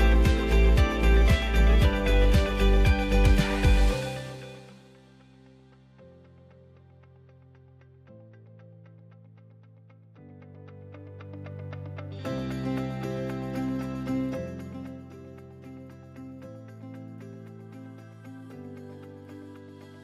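From 14.21 to 15.14 s a rapid ticking rides on the sound as it falls roughly 15 dB. This is zipper noise, from unsmoothed 1 dB gain steps.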